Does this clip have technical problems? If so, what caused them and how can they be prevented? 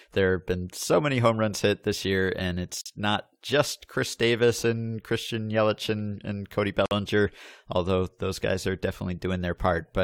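Yes: the speech shows gaps at joins of encoded pieces, silences of about 46 ms at 2.81–2.86 s (between "hit this year and" and "not just") and about 53 ms at 6.86–6.91 s, four seconds apart. Each gap comes from encoder start delay and last-frame padding left in when separately encoded pieces were joined. It looks like a narrow vertical blank with smeared edges on a spectrogram or a flat stretch in the waveform. Trimming encoder delay and padding before joining, or encoding the whole recording in one pass, prevents this.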